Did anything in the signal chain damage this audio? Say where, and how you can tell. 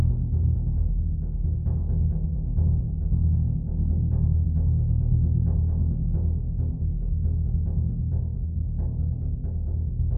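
No, nothing damaged this music.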